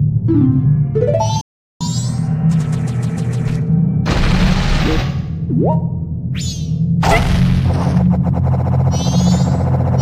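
At 1.41 s the sound cuts out and the output sits silent until 1.81 s, a gap of roughly 0.39 s, after which it resumes. This is a playback stall. The likely cause is the player's buffer running dry, or its output thread being held up, so that no samples reached the device for the length of the gap.

From 1.81 s to 4.81 s the audio runs fast, at 1.1 times normal speed, and its pitch is raised by about a semitone and a half. This is catch-up at higher speed. Having fallen behind during the stall, the player resamples its queued backlog to drain it more quickly. Because resampling shifts speed and pitch together, the whole three-second stretch sounds hurried and sharp. At 4.81 s playback drops back to its normal rate and pitch.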